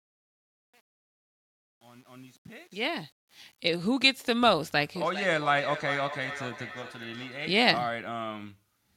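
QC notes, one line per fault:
0.00 to 3.60 s, truncation distortion on a fade: the fade-in rises smoothly enough in level, but the start sounds gritty, worst from 0.00 to 3.26 s while the level is lowest. The fade stage is only keeping about 9 bits with no dither, so near the bottom the waveform collapses into a handful of coarse square steps instead of a clean, quiet signal.
4.96 to 7.62 s, feedback echo between two devices: the speech comes back as a thinner, ringing repeat at a steady interval of roughly 0.4 s, peaking at about 12 dB below the direct speech. That's two devices on the same call in one room. One plays out what the other's mic sent, that mic picks it up again, and neither echo canceller removes it because each only cancels what its own device plays.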